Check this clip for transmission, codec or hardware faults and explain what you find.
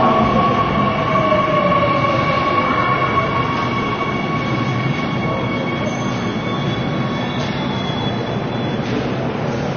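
One codec fault runs through the whole clip: AAC compression, likely AAC-LC at a low rate around 24 kbps. Nothing is left above 6.5 kHz, and the quantised spectrum leaves dull, smeared sound with a warbling, fizzy texture that a simple low-pass filter wouldn't produce.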